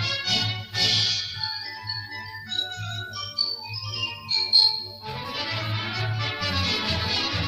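No technical faults can be heard anywhere in the audio.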